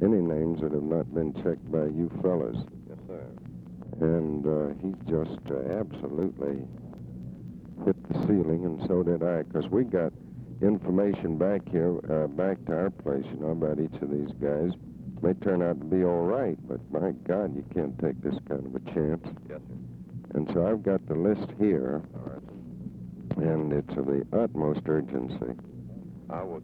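From 4.98 s to 8.23 s the clip has periodic USB or driver dropouts: something repeatedly stalls the USB bus or the audio driver at a steady 0.25 s interval, and each stall loses a fraction of a millisecond of samples, which are replaced by silence. The result is about fifteen small, evenly spaced ticks, four per second, riding on the sound and audible only where signal is present.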